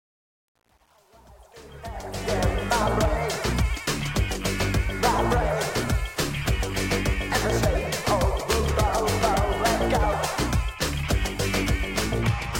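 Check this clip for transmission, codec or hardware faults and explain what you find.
One fault is present. From 0.0 to 2.41 s there is truncation distortion on the fade-in. The gain stage rounds without dither to a resolution that points to 9 bits, so the quiet start becomes coarse square steps. It sounds gritty, worst through 1.99 s.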